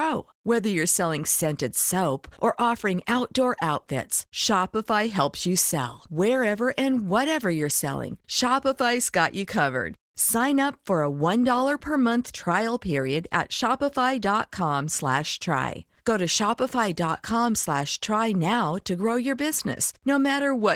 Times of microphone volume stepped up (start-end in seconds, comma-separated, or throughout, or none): none